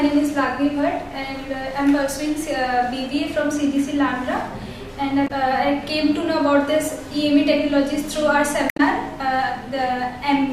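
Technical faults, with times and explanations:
5.24–5.31 s and 8.66–8.80 s: damaged data in a compressed stream. Two brief bursts, about 70 ms and 140 ms long. Corrupt bytes made the decoder misread those frames and lose sync. It glitches until it finds the next valid frame header.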